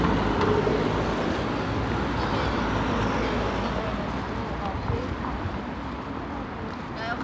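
Nothing's technically wrong with this recording of sounds; it's simply gone through a call's microphone processing and a G.722 call path, which is why nothing reaches above 8 kHz, and that's just how such a call is expected to sound.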